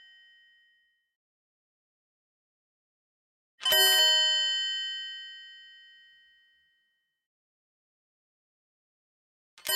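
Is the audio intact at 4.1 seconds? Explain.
No, there's a single sharp click at 4.08 s. It's likely dropped samples: roughly one sample goes missing, so the waveform jumps straight to a later value. That's far too brief to lose any sound, just a thin vertical streak across the spectrum.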